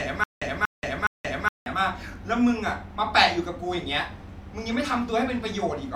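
From the very start until about 1.66 s, the playback likely stalled and retried, replaying the last fragment each time before running dry. This is a stutter with silent gaps, already under way when the audio begins: a 0.24 s burst of speech repeats three times, each followed by about 0.18 s of dead digital silence, so the pattern cycles every 0.42 s. The speech that should have filled those gaps is simply missing.

At 2.02 s, the time stamps of two adjacent stream segments overlap, and the player trims the overlap away even though that audio was never actually doubled. This overlap between stream segments removes a few milliseconds of speech, and the waveform jumps across the cut. It is heard as a brief click or tiny skip. Its position just after the 2 s mark fits a stream built from 2-second segments.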